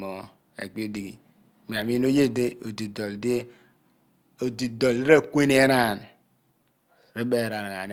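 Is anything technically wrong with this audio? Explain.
No, nothing in this speech recording sounds technically wrong to me, so there's no fault to point to here.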